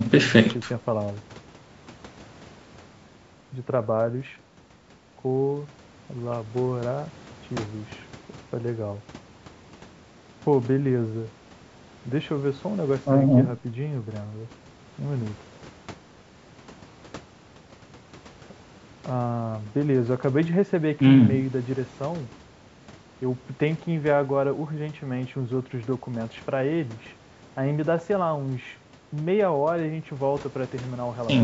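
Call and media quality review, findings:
Nothing to flag on this speech recording: the room noise sits about 20 dB under the talker, and the call's microphone processing behaves as expected, trimming the lowest bass.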